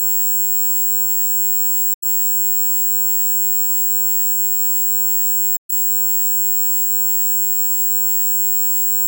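Digital broadcast dropout occurs at 1.93 to 2.04 s and at 5.56 to 5.71 s. The receiver lost valid frames and muted, fading out over 8 ms. The 85 ms hole fits two lost frames and the 128 ms hole fits three. Sound sent during each gap is simply missing.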